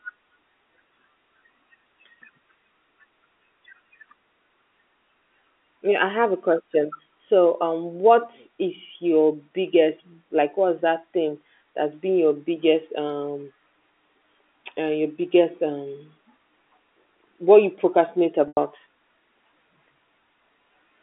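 Speech over a telephone line, with band-limited G.711 coding, where packets go missing at 18.48 s, just after "what you procrastinate," and the receiver applies packet loss with pitch repetition, replaying the last pitch period and fading it out over about 50 ms across a gap of about 90 ms, likely three lost packets. That gap comes out as a brief held, buzzy tone that fades into silence before the speech resumes at 18.57 s.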